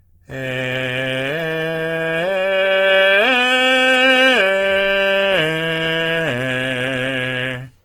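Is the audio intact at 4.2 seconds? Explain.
No, at 4.2 seconds the music sounds rough, grainy and noisy, as throughout the clip, likely from Opus compression at about 16 kbps, filling starved bands with noise.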